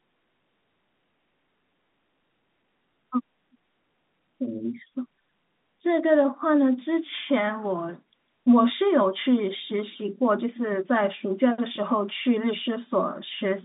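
Nothing stood out on listening to this telephone-band speech.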